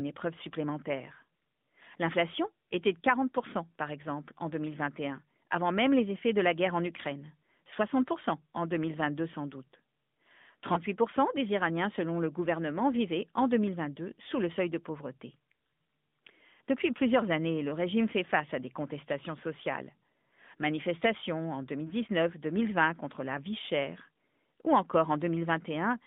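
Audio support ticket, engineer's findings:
AMR narrowband mobile codec throughout. Speech band-limited to about 200 Hz–3.6 kHz, nothing above. Buzzy, synthetic texture plainly audible, consistent with roughly 10.2 kbps AMR-NB mode.

Lost AMR speech frames at 10.74 s and 21.88 s. Single 20 ms frame each. Decoder repeats last pitch and spectral settings with reduced gain: brief dip or warble, then rough recovery.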